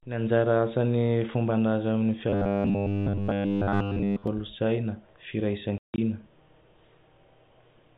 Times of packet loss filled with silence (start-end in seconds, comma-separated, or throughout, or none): 5.78-5.98